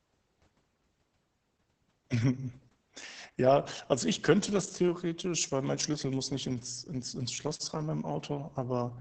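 Opus voice compression runs through the whole clip. The sound points to a very low bitrate of around 10 kbps, with the codec's speech-oriented SILK linear-prediction mode working in wideband, so nothing survives above about 8.5 kHz. The damage is heavy: with so few bits, the excitation is coded coarsely in 20 ms frames, leaving the speech muffled, hoarse and faintly robotic.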